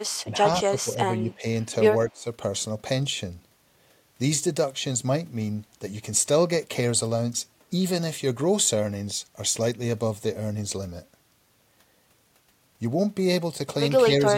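Speech that dips sharply, about 10 dB at 0.24–1.44 s, about 20 dB at 2.11–2.27 s and slightly near 14.09 s, is likely speech suppressed in double talk by an echo canceller.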